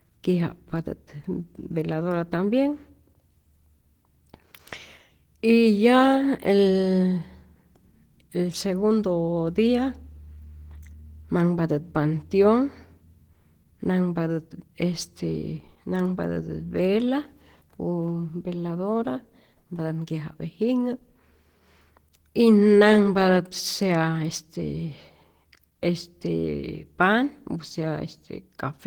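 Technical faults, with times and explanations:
Throughout, Opus compression: the speech has plainly audible coding damage, a muffled, hoarse texture with grainy, noise-like fill rather than swirling holes, though content still reaches about 20.2 kHz. This is likely an Opus encoder in its hybrid mode, which codes the lower band with a speech model and codes the upper bands with a transform coder that keeps each band's energy. The roughness points to a bitrate near 16 kbps, too few bits to code fine detail.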